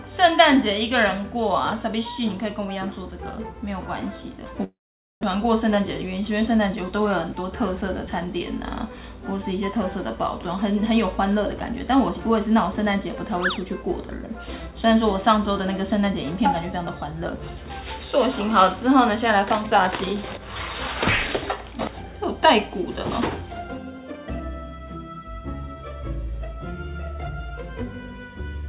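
From 4.64 to 5.25 s the sound stops being real and turns into a smeared, fading buzz that dies away to near silence. About 400 ms of audio never returns. This is a long network dropout, likely caused by packets that never arrived while the receiver padded the gap.

From 5.37 to 8.34 s the audio runs about 5% fast at unchanged pitch, sounding slightly hurried. This is a jitter buffer speed-up. The receiver trimmed short pitch-period slices, roughly 150 ms in total, to drain the delay built up after the gap.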